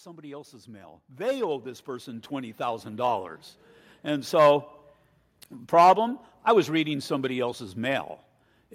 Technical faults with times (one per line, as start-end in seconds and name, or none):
0.05-3.33 automatic gain rising